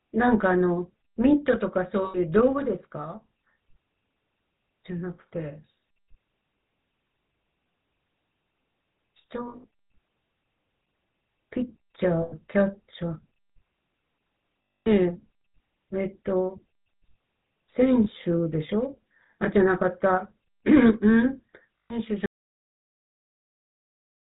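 The speech passes throughout through the GSM full-rate codec, which models the vocal tract, excites it with sparse regular pulses and discards everything above 4 kHz. The result is a dull, band-limited sound with a buzzy, gravelly roughness that stays plainly audible across the clip.

Lost GSM frames occur at 2.04–2.18, 9.48–9.65, 12.22–12.34, 14.78–14.88, 18.04–18.07 and 21.78–21.93 s. The decoder fills each gap by repeating the settings of the last good frame, so the sound briefly freezes into a rough metallic ring. At 9.48 s the losses are scattered rather than continuous.

From 22.26 s to the end, an audio dropout to silence leaves silence with no room tone. The most likely cause is that the input feed was lost while recording continued.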